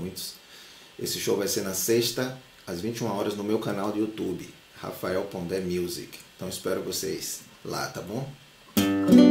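Nothing stood out as technically wrong on listening.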